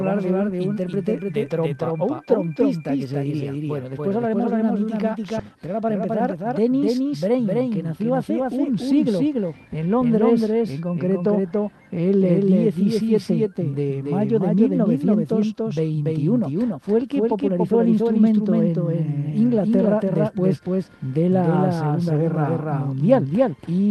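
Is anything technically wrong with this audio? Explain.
Yes, three things stand out.

A doubled audio track runs the whole way through. A second full-band copy trails the original by around a third of a second at roughly the same level, with no reverb tail or room colour. The likely cause is the audio being captured twice, once by a slower path.

At 5.39 s there's a skip ahead. Something like 0.7 s of audio drops out, probably when the jitter buffer overflowed with later audio already queued, and playback jumps forward with the two sides butted together and no gap.

Right after that, from 5.48 to 7.45 s, there's a jitter buffer speed-up. The receiver trims tiny pitch-period slices again and again to bring its delay back down, about 200 ms in total, so that stretch runs about 11% fast at unchanged pitch and sounds hurried.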